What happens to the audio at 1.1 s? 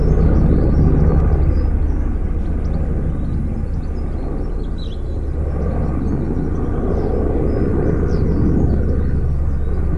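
Nothing goes wrong at 1.1 s: the sound carries on intact through that moment, with no dropout, click or other audible fault.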